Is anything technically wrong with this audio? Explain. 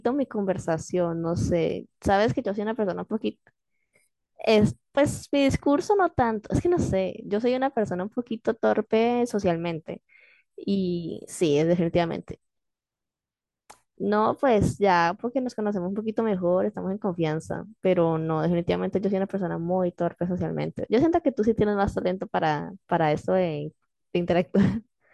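No, nothing is technically wrong with this audio.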